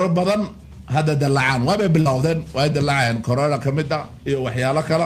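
From 2.01 to 2.07 s, short concealed packet loss. About 40 ms never arrived. The decoder continued the preceding sound, heard as a brief smear.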